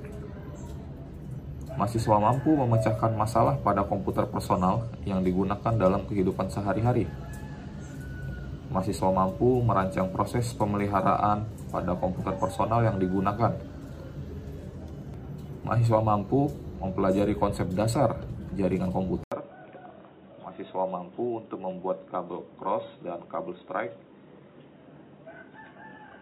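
At 19.24 s an 80 ms gap gives way to duller, slightly quieter sound cut off above 3.8 kHz with a new, faint noise floor, likely an input switched to a poorer device.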